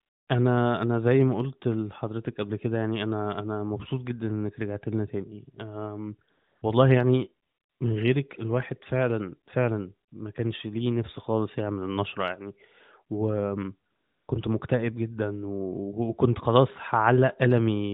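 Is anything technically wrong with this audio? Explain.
Yes. AMR comfort noise appears at 0.0–0.28, 6.30–6.62, 7.48–7.80, 10.10–10.12 and 13.90–14.28 s. During these pauses the phone stopped sending speech frames, and the receiver substituted a smooth, steady synthetic hiss for the real background. Unlike a noise gate, which would drop to silence, the gaps fill with uniform noise that switches abruptly in and out. The narrowband codec passes nothing above 4 kHz.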